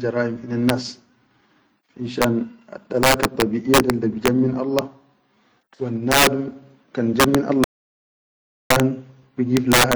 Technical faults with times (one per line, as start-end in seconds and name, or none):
7.64-8.70 audio dropout to silence